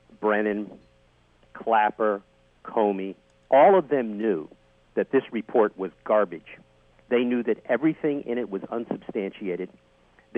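No technical faults can be heard anywhere in this audio. Nothing in the sound stands out as needing comment at any point.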